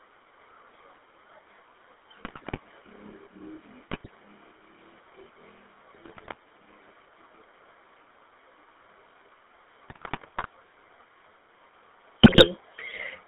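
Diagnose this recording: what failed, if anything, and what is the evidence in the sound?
Throughout the speech there is a buzzy, gravelly roughness, with nothing heard below about 300 Hz or above 3.7 kHz. That is the sound of the GSM full-rate codec, a codec-stage fault at a rate that fits the 13 kbit/s full-rate coder. It rebuilds the voice from a vocal-tract filter excited by coarse, regularly spaced pulses that keep only part of the excitation detail, so the natural texture becomes a grainy buzz, plainly audible across the whole recording.

Superimposed on that are bursts of squawking, popping and gargling at 2.22–2.59 s, 3.88–4.09 s, 5.94–6.35 s, 9.88–10.48 s and 12.23–12.47 s, the longest at 9.88 s. These are GSM bit errors, a network-stage fault. Corrupted bits on the radio link reached the decoder and scrambled the filter, pitch and gain parameters frame by frame. The voice's spectrum is bent out of shape and its level jumps erratically for the span of each burst.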